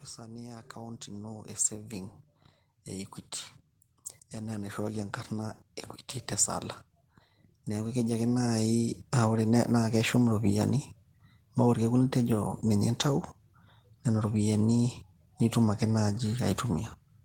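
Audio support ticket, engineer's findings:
Automatic gain rising, 0.17–2.19 s (about 8 dB), 3.81–5.64 s (about 5 dB), 7.51–8.85 s (about 6 dB). AGC reads input as too quiet and ramps gain up; speech and noise floor swell together. Waveform: envelope widening steadily. Spectrogram: all bands, noise floor included, brightening uniformly.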